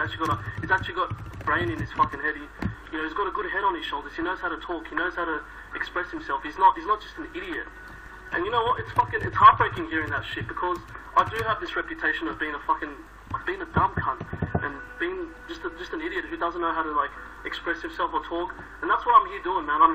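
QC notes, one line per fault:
No faults found. Nothing in the audio calls for a note.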